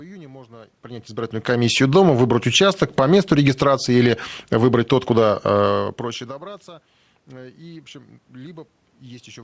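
It's a speech clip over a call path with nothing above 8 kHz, which fits G.722. The fault is automatic gain falling from 4.39 to 5.94 s: the AGC judged the input too loud or its background noise too strong and eased its gain down by about 4 dB, so the speech and room noise sink together.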